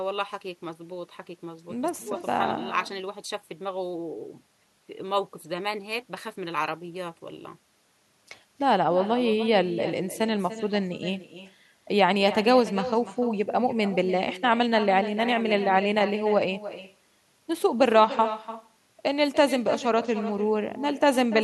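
From start to finish, every phrase of the speech is trailed by a quieter copy arriving roughly a third of a second later, sitting about 13 dB below the direct sound and sounding thinner. This is echo with no canceller: the far end's loudspeaker feeds its microphone and the returned signal is never subtracted. Unlike ordinary room reverberation, which smears into a smooth decay, this is a distinct, delayed repeat.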